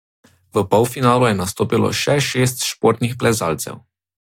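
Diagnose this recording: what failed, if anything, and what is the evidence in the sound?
Nothing in the signal chain has failed: the speech signal is continuous and stable throughout, with no audible disturbance at any stage between capture and playback.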